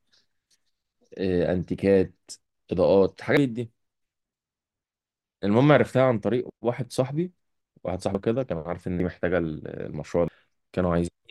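A speech clip with compressed frames skipped at 3.37, 8.15, 9.00 and 10.28 s. Each time the speech jumps ahead, by roughly a second, or about 0.7 s at 8.15 s. Whole frames went missing or were rejected as damaged.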